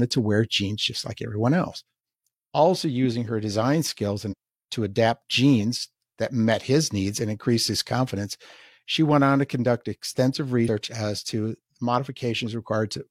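At 4.28 to 4.34 s and again at 10.64 to 10.69 s, compressed frames are skipped, dropping roughly 150 ms and then 100 ms of speech. The jumps fit whole frames of about 46 ms each, so about three and then two frames. On a spectrogram, the harmonic tracks break, and on the waveform the envelope jumps abruptly.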